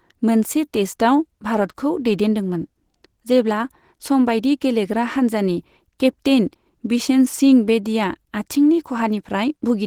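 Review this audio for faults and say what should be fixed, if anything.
Opus compression, present throughout: the speech has a plainly audible muffled, hoarse, grainy quality, with no content above 20.2 kHz. Because these artefacts persist across the whole clip, the likely cause is Opus running in its hybrid speech mode at a low rate, which fits a bitrate around 16 kbps. There, bits are too scarce to code fine spectral detail faithfully, so bands get filled approximately and the speech turns rough. To prevent it, encode at a higher bitrate or export from the original uncompressed source.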